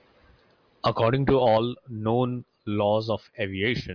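No technical faults are audible anywhere in this speech recording.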